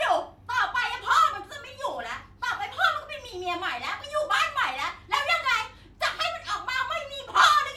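No technical faults can be heard anywhere in the speech recording. Nothing in the audio points to a problem with how it was captured or delivered.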